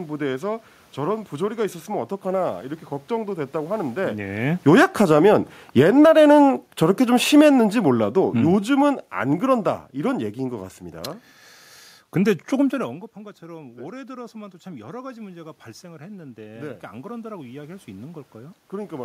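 At about 4.5 s the talker seems to move. The automatic gain falling begins at 4.53 s. The gain control judges the input too loud and pulls its gain down, about 9 dB by 6.08 s. Voice and room noise sink together. From 5.19 s it reverses with a short automatic gain rising of about 3 dB, ending at 6.63 s. Then it falls again from 6.6 to 10.3 s, by about 8 dB. The result is a pumping level, dipping, lifting slightly, then dipping again. The background noise moves with the voice each time.

Near 12.5 s the talker appears to move away, and the input drops by about 18 dB. From 13.47 s the automatic gain rising answers this slowly. It lifts about 10 dB over more than five seconds, until 19.0 s. Voice and room noise swell together in a long, gradual climb. The voice still ends well below its earlier level.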